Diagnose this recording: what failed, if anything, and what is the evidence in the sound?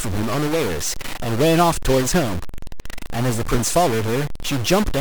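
A stuck bit is present throughout: pauses fill with hiss. One converter data line is likely held constant, shifting about half the samples by its weight. Waveforms show stepped offsets flipping with sign, and spectrograms show broadband noise in gaps.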